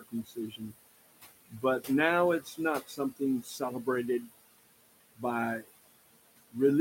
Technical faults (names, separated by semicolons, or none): noise suppressor artifacts; speech cut by the noise suppressor